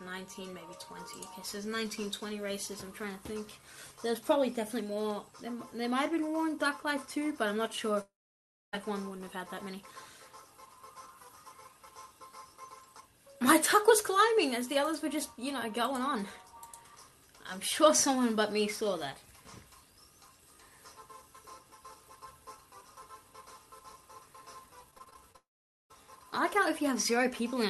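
Long network dropouts at 8.01–8.75 s and 25.36–25.92 s: the audio smears into a fading buzz, then goes silent for about 0.6 s and 0.5 s before resuming further on, likely because the stream stopped arriving and roughly 0.7 s and 0.5 s of sound were never played. Repeated packet loss (robotic sound) from 24.91 to 25.36 s: seven short holes, none over about 21 ms, are each patched by stretching the previous sound, making the passage choppy just before the second dropout. The audio passed through a call codec whose bandlimited character fits Opus at around 32 kbps, with content above about 12 kHz missing.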